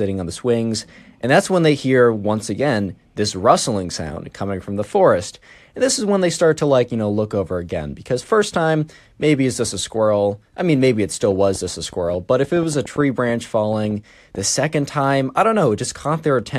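A speech clip with one problem: a train of clicks running from about 11.23 to 14.39 s, starting right after "I mean maybe it" and clearing just before "second time I don't". You get around twenty similar-shaped pops at roughly 5.7 per second, spaced unevenly, and they land about as loud as the speech itself. Pulses like that are likely coming from interference off nearby gear or a faulty connection or power supply.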